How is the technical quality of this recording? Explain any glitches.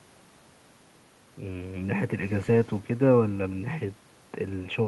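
The technical quality of this recording is sound, with no glitches to explain.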